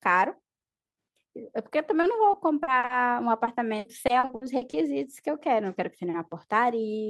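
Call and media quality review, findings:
Repeated packet loss (robotic sound), 2.01 to 2.91 s and 3.45 to 4.75 s. Choppy speech with pieces missing. Network path and jitter buffer. Each lost packet is filled by extending the previous audio. Gaps reach 40 ms, then 60 ms, with 18% and 25% concealed.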